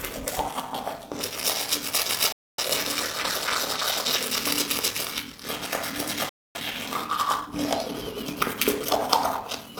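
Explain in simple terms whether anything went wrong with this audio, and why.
Yes, two things went wrong.

The first is a block size mismatch (padded), and it lasts the whole clip. One stage of the system hands over chunks of audio that are shorter than the next stage expects, and the missing part of each chunk is filled with silence. The sizes heard here fit chunks of 1024 samples being read as 1152. Those tiny gaps repeat about 38 times a second, which you hear as a steady buzz. The sound also plays slowly, at about 0.89 times normal speed, while its pitch stays about normal.

The second is a digital broadcast dropout, and it happens twice: from 2.32 to 2.63 s and from 6.29 to 6.60 s. Each time, the receiver lost good data for about a quarter of a second. That fits roughly six damaged frames in a row. The receiver muted instead of playing corrupted sound, so the audio fades out almost instantly and comes back afterwards. 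Whatever was sent during those gaps is gone.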